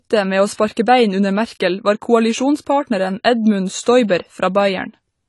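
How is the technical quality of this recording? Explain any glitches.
The recording is clearly degraded by codec damage, with three audible pre-echo smears.

Throughout, the sound is dull and smeared, with nothing above 11.4 kHz. This is likely AAC compression at a low bitrate, about 32 kbps. A spectrogram shows a hard ceiling and patchy upper bands.

Pre-echo appears at 0.53 to 0.59 s and 0.72 to 0.77 s, just before "bein under", and at 3.82 to 3.86 s. Block-spread quantisation noise adds roughly 50 ms of hiss before each attack. It shows as smudges before the waveform's onsets.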